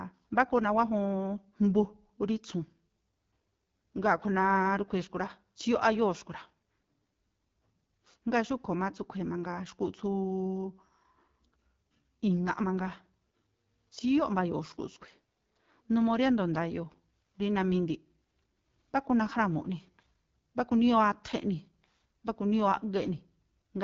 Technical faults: AMR wideband (HD Voice) codec

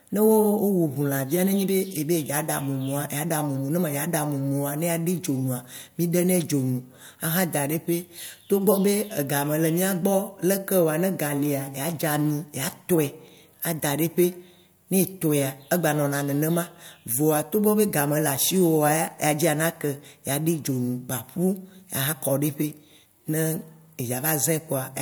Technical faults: none

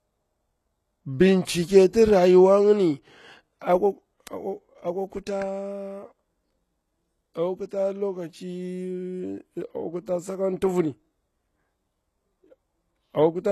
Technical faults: low-bitrate audio saved at a high bitrate

